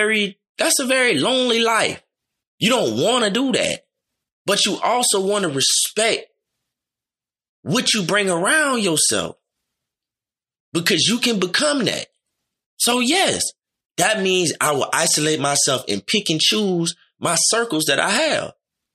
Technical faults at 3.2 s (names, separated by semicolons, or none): none